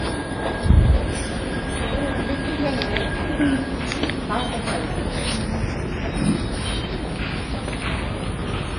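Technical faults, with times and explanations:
Throughout, low-bitrate audio saved at a high bitrate. Nothing is heard above 10.3 kHz, and the highs sound dull. The sound likely passed through a very low-bitrate codec, fitting about 24 kbit/s, then high-bitrate MP3. Re-encoding cannot restore the lost detail.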